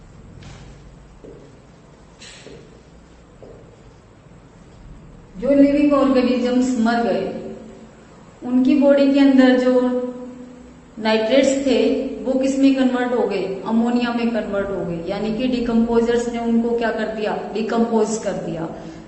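No technical faults are audible.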